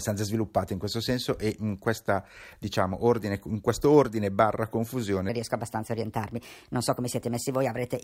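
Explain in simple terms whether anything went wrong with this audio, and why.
Yes. From 5.29 s to the end, after "questo ordine barra confusione", there is a section at the wrong speed: about 1.23 times faster and roughly four semitones higher, likely from a wrong clock.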